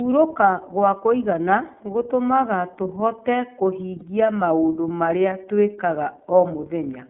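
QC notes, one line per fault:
throughout, iLBC codec: the speech is band-limited to roughly 150 Hz to 3.5 kHz and sounds slightly rough and synthetic, with plainly audible coding damage. This fits the iLBC narrowband codec, which encodes each 30 ms frame's excitation independently at around 13.33 kbps.
3.99 to 4.03 s, lost iLBC frames: a brief held, faintly buzzy vowel-like sound fills the gap just before "maũndũ marĩa twĩkaga", and the voice comes back cleanly right away. That points to a single lost 30 ms frame concealed by repeating the last pitch cycle mixed with noise.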